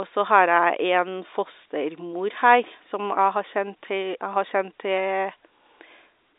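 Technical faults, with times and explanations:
No technical faults are present, with no times to give or explanations needed.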